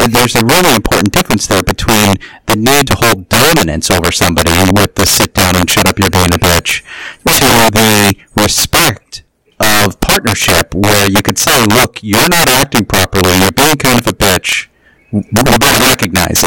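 Integer overflow runs throughout this speech recording: with the level driven about 11 dB too hot, around 7 percent of samples exceed the integer ceiling and wrap to the opposite extreme instead of clamping, so every loud peak becomes a violent crack far harsher than clipping.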